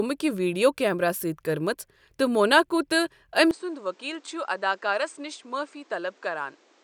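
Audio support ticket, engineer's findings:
At 3.51 s, no gap, speech goes dull and boxy to the end, nothing above 8.8 kHz, about 10 dB quieter, new noise well under the speech. Likely an input switched to a poorer device: narrower band, different mic character, its own noise.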